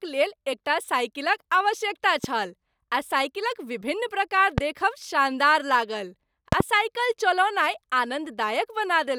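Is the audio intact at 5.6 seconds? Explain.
Yes, the audio is intact at 5.6 seconds, with the speech running through that moment without any audible fault.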